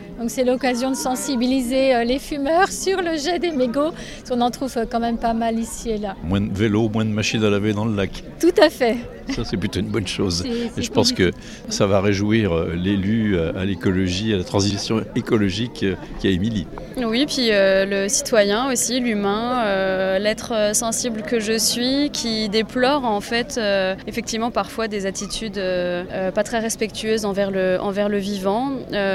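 No technical faults are audible.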